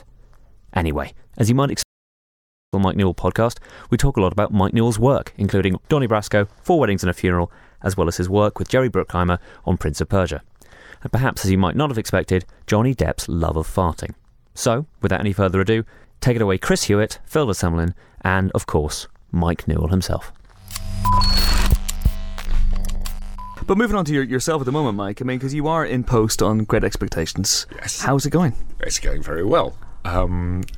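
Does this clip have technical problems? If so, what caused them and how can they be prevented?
Yes. At 1.83 s the sound cuts off abruptly in mid-flow and stays silent until 2.73 s, a gap of about 0.9 s. This is a playback stall. The player was likely starved of data, or its audio thread was blocked, so the output had nothing to play until it recovered. A dropout lasts only milliseconds, but this silence is long enough to register as a clear halt, and it begins with a hard cut rather than a fade. Prevent it with a larger playback buffer and by keeping the audio thread free of blocking work.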